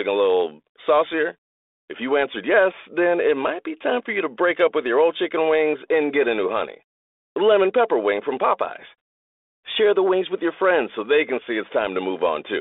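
No technical faults can be heard in the speech, which comes over a 32 kbit/s G.726 telephone path.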